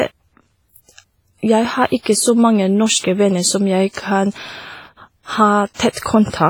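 WMA compression damage runs throughout this speech clip: the sound is ringing and washy, with a hiss that swells and fades with the voice. This is likely heavy transform coding at a low bitrate, consistent with about 24 kbps, smearing quantisation noise across long blocks and zeroing weak components.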